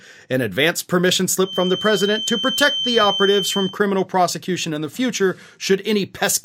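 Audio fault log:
1.39–3.78 s, feedback whistle: the loudspeaker-to-microphone loop was likely held at the edge of feedback, ringing at one frequency without running away. A thin 3.1 kHz whistle, slowly swelling and fading, sits a little below the speech, from after "an advance permission" until "prosecution in the future".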